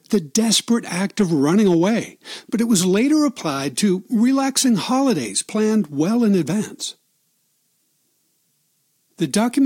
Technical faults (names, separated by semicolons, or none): hard clipping